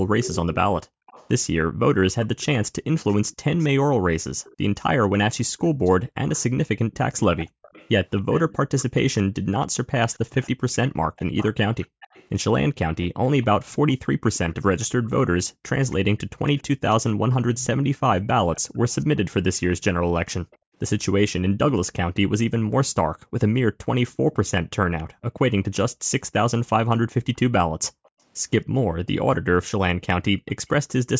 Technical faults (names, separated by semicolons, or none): echo leak; background gated by the echo canceller